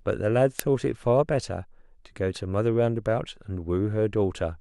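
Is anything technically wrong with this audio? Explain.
Yes. An uninitialised buffer at 0.59 s: a playback block was sent to the output before any audio had been written into it, so whatever stale values sat in that memory were played as samples. The event lasts about 1.45 ms, which fits a 64-sample block. In this speech clip it is a sudden, loud click of digital noise, over almost as soon as it begins.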